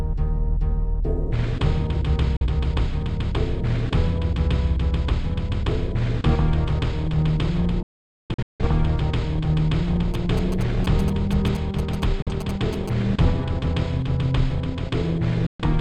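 Digital broadcast dropouts: the receiver mutes with quick fades when frames fail, at 2.37–2.46 s, 7.83–8.65 s (scattered holes, longest about 0.47 s), 12.22–12.32 s and 15.46–15.65 s. GSM signalling bursts from a nearby phone get rectified from 10.14 to 12.89 s, a galloping 217 Hz buzzing well under the programme.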